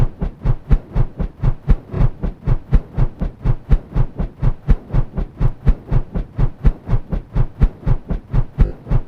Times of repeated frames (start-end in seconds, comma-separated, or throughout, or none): 1.94-2.01, 8.65-8.72